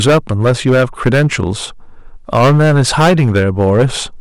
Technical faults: hard clipping

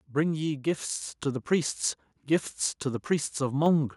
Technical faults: microphone volume stepped up

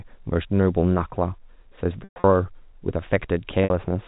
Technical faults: packet loss with pitch repetition

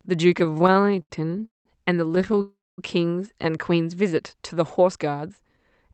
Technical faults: repeated stalls (stutter); call audio freeze; jitter buffer speed-up

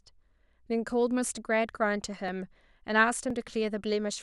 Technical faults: periodic USB or driver dropouts

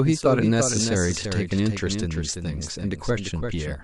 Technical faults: doubled audio track

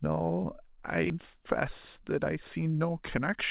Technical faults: skip ahead; jitter buffer speed-up

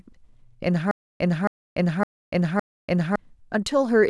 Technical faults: stutter with silent gaps

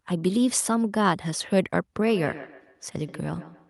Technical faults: feedback echo between two devices

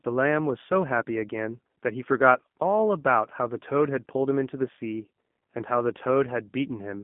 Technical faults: G.729 codec

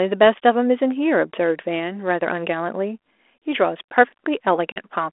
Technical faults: packet loss on an ADPCM call

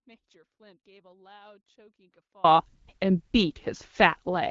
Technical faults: audio dropout to a faint residue

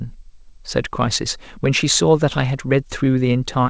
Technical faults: none

